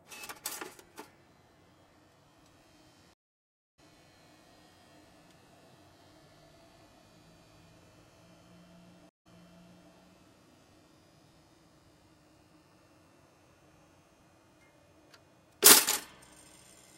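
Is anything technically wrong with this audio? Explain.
Yes, there are two stream reconnects. At 3.14 to 3.79 s the connection drops, leaving 645 ms of silence, and a fresh decoder picks up roughly half a second later in the stream, so material is skipped. At 9.09 to 9.92 s, a 163 ms gap ends with playback resuming 661 ms earlier, as the server resends a burst, so a stretch of sound repeats.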